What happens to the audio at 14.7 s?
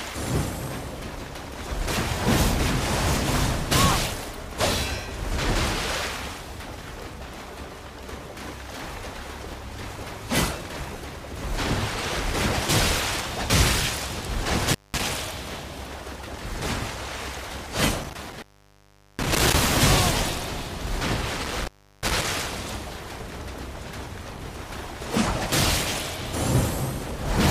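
An intermittent contact fault hits from 14.65 to 15.03 s. A loose connection opens for about 196 ms. The sound drops out, with crackle at each edge.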